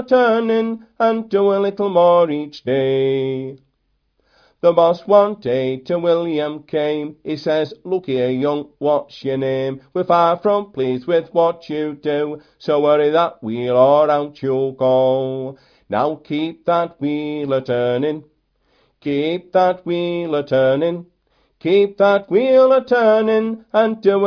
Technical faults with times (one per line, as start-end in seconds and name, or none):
none